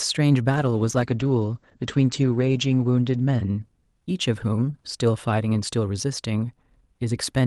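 From 0.53 s to 5.01 s the speech turns rough and watery, and its top end dulls as the audible bandwidth narrows from 12 kHz to 8 kHz, staying at its worst for about 2.4 s before clearing. This is a call bitrate drop: the bandwidth estimate on the Opus call path fell, so the encoder coded far more coarsely and trimmed high frequencies, which fits a fall from around 64 kbps to about 12 kbps.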